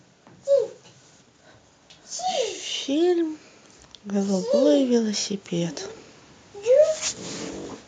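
From 4.1 to 5.83 s the automatic gain is rising: the AGC decided the input was too quiet and eased its gain up about 6 dB, so voice and background swell together.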